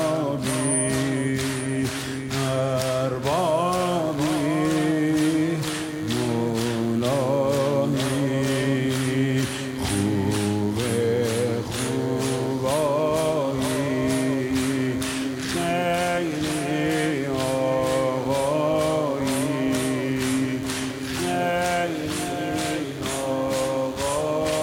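From 3.25 s to the end, a nearby DECT base or handset pulses its radio carrier every 10 ms, and the audio circuitry rectifies those bursts. The result is DECT cordless phone buzz, a steady, thin 100 Hz buzz rich in harmonics, sitting about 25 dB below the sound.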